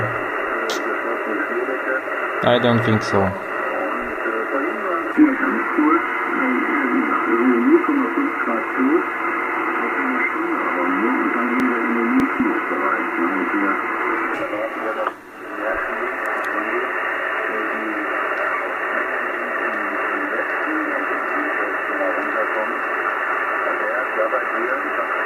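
Between 11.60 and 12.40 s the sound briefly turns jumbled, as if a fragment has been shuffled. This is chunks out of order: a 200 ms block of audio arrived late and was played three chunks after its proper place, so the three blocks that should follow it come first. Nothing is missing, but the misplaced block creates three abrupt seams.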